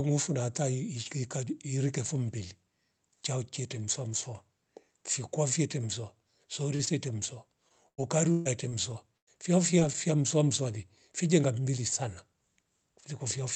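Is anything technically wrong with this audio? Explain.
Yes, the call suffers from packet loss at several points.

Short concealed packet loss occurs at 6.75–6.81 s, 6.85–6.89 s and 9.80–9.83 s, just before "fia mswamswale". Each 20–40 ms hole is patched by extending the preceding sound, heard as a brief smear or wobble.

Repeated packet loss (robotic sound) runs from 7.69 to 8.73 s. Four gaps, the longest 135 ms, are each filled by continuation, covering about a quarter of that stretch and giving choppy speech with pieces missing.

A burst of packet loss at 9.17–9.29 s removes about 100 ms. The concealment holds the last sound as a fading buzz or hiss before the speech resumes further on, with the intervening audio gone.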